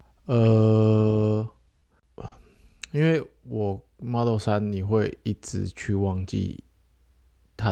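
At 1.80 to 1.84 s and again at 2.28 to 2.34 s, a packet arrived late and the jitter buffer ran dry, causing a short stall from a late packet. The receiver stretched the last sound by 20 ms, then 40 ms, and resumed where it left off, so the speech is held slightly too long rather than cut.

From 3.38 to 4.22 s comes a jitter buffer slow-down. The receiver, rebuilding its reserve, repeated individual pitch periods, adding 78 ms. Speech plays at 92% speed with the pitch unchanged, sounding drawn out.

From 6.78 to 7.69 s, a jitter buffer speed-up trims the surplus delay. The receiver cut short pitch-period pieces, about 40 ms in total, so speech runs at 104% speed, with pitch intact.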